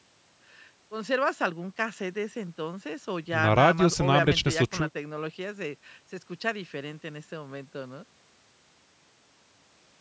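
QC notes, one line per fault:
No faults found in this speech clip. The call microphone processing can be heard in the trimmed lowest bass and in nothing reaching above 8 kHz, both normal for that path.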